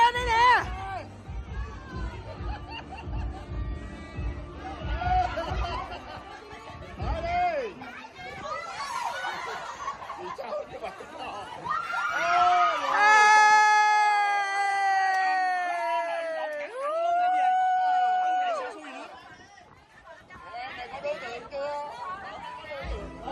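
Nothing in this clip points to a technical fault; the audio runs along steadily with no glitches, dropouts or other trouble to flag at any point.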